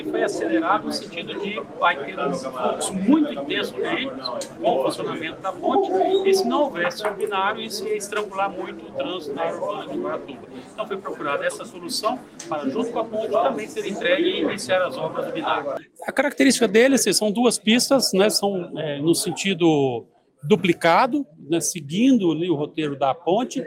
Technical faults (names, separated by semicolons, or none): none